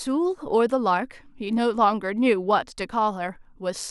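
At 0.69 s the speech carries a corrupt frame decoded: a single compressed frame arrived with flipped bits, and the decoder played it rather than concealing it. Misread gain values and codebook indices placed energy at frequencies that have nothing to do with the surrounding signal, for roughly the span of that one frame. It is heard as a brief, quiet glitch, with the stray energy peaking at about -35 dBFS.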